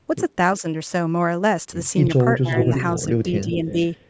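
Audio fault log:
2.41–2.55 s and 3.43–3.81 s: speech suppressed in double talk. The voice dips, by about 20 dB at the first spot and about 5 dB at the second, while the far side is also talking. This is likely an echo canceller unable to separate the near talker from loudspeaker echo, so it turns both down.
2.57–3.01 s and 3.41–3.54 s: echo leak. A delayed copy of the voice comes back 347 ms behind the original, about 5 dB below the speech in the first stretch and about 15 dB below in the second. This is likely a speakerphone whose echo canceller let part of its microphone pickup through, sending it back.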